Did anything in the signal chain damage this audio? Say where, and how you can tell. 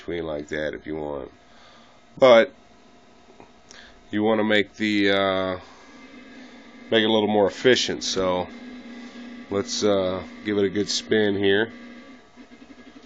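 No, nothing in the signal chain has damaged this audio. No stage, from capture through to playback, leaves any audible trace of a problem.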